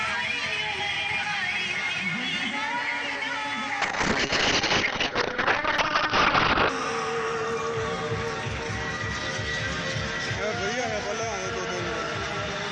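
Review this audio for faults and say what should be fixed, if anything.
Between 3.82 and 6.75 s there's a call bitrate drop. The bandwidth estimate fell, and the encoder was pushed from full quality down to something that sounds like roughly 6 kbps, holding at the bottom for about 2.9 s. You can hear the top end disappear as the cut-off falls from about 20 kHz to 6 kHz, and the coarser coding makes everything sound muffled and a bit watery until the rate climbs back. To prevent it, smooth the bandwidth estimator and set a sensible bitrate floor so one bad estimate can't crash the encoder that far.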